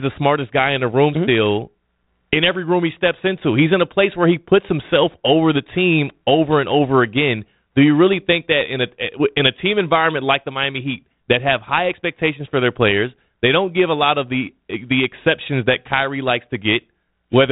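Nothing here counts as a fault: the speech comes over a G.726 ADPCM link at 32 kbit/s, with the usual telephone-band ceiling near 3.9 kHz and just a light touch of coding grain, which is simply how that path sounds when it's doing its job.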